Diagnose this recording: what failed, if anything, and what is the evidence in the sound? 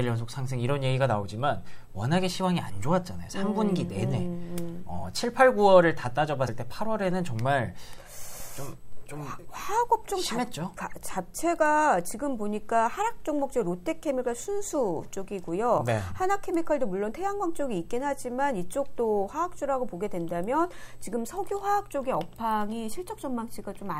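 Codec stage, compressed frames skipped: jumps at 6.48, 8.40 and 10.77 s, where the audio skips ahead one or two 32 ms frames.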